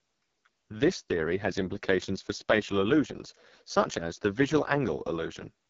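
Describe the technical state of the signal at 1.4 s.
At 1.4 s the speech carries the AMR wideband (HD Voice) codec damage heard through the whole clip. It sounds rough and raspy, which fits the 6.6 kbit/s mode. A pulse-driven vocal tract model codes it coarsely. Nothing is present above 7.3 kHz.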